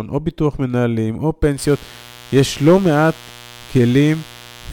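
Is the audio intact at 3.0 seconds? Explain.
No. At 3.0 seconds the speech carries mains buzz, present from 1.55 s to the end of the clip. Sharp switching spikes locked to the 60 Hz supply put a ladder of harmonics up into the kilohertz range, heard as a steady raspy buzz roughly 25 dB below the speech.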